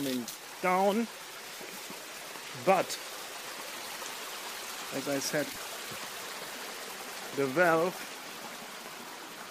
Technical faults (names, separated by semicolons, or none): broken MP3 bit reservoir